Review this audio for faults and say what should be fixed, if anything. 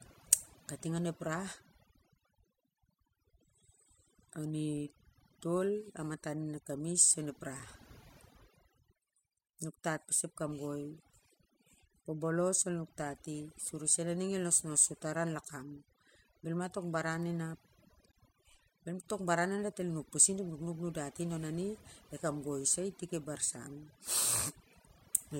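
A noise reduction stage was set far too strong, muting frequency bands near its noise estimate along with quiet speech detail. This overdone noise removal leaves twinkling specks over near silence. Lower the reduction amount so quieter speech components stay above the suppression threshold.

The output buffer likely went unfilled twice, dropping blocks of digital silence at 7.60 s (5.3 ms, consistent with a 256-sample buffer) and 18.12 s (16 ms). Each block is heard as a hard tick or brief hole. Give the audio thread enough processing headroom, or enlarge the buffer, so every block is filled on time.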